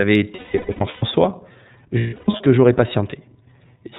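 The whole clip has passed through the iLBC codec, a narrowband coder whose texture points to its 30 ms frame mode at roughly 13 kbps. Nothing above 4 kHz survives, so the speech sounds muffled, with a plainly audible rough, synthetic edge.

From 0.35 to 1.03 s, lost iLBC frames leave about 510 ms missing, scattered over 660 ms. The longest unbroken gap lasts about a fifth of a second. The decoder fills each gap by repeating the last pitch cycle mixed with noise, so the sound holds as a buzzy, breathy vowel before snapping back clean.

Between 1.98 and 2.41 s, more lost iLBC frames remove about 330 ms, spread over 420 ms, with runs of up to roughly 150 ms. The same concealment produces shorter held, buzzy smears, and clear speech returns almost immediately after each one.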